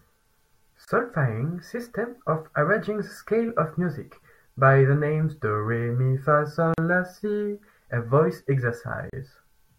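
At 0.85 s the speech drops out for about 27 ms, until 0.88 s. It is a gap at a join of encoded pieces. The pieces were encoded separately and butted together untrimmed, so encoder start delay and final-frame padding sit between them as silence. The edges are smeared by the codec. Speech resumes where it stopped. The same dropout recurs at 6.74 to 6.78 s, about 41 ms, and at 9.10 to 9.13 s, about 33 ms.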